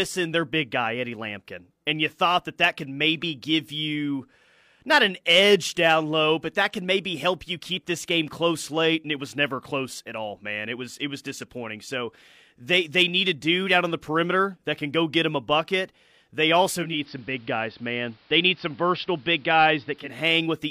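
Digital radio blending to analogue in this speech, 16.71 to 20.26 s: a 0.35 s cross-fade to AM drops the level about 1 dB and adds faint hiss.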